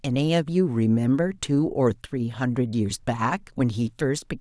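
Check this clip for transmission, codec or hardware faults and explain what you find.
Nothing stood out on listening to the speech here, with no transmission, codec or hardware trouble to point to anywhere in it.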